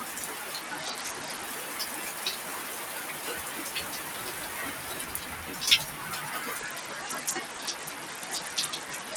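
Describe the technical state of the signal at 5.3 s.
At 5.3 s, held parts and tails of the sound sink and pump by around 5 dB while onsets pass; a noise suppressor applied to music or sounds, active throughout, mistakes sustained content for noise.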